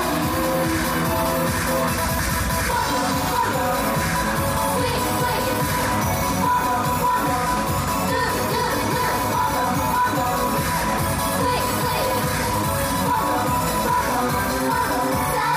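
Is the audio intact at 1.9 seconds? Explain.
No. At 1.9 seconds a steady chirping warble sits behind the sound, roughly 15 dB down, flipping between pitches around 1 kHz and 2 kHz. The cause is timecode bleed, present throughout the clip: 29.97 fps linear timecode, a square-wave signal, leaking in from a neighbouring track or cable.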